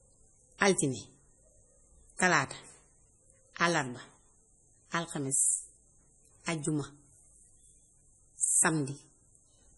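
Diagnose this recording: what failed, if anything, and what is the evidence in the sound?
The codec stage shows heavy damage throughout the speech, most likely MP3 compression. Nothing is heard above 11.5 kHz, and the watery, swirling texture on sibilants fits a starved bitrate near 32 kbps. A plain low-pass filter would dull the treble without that frame-to-frame flicker.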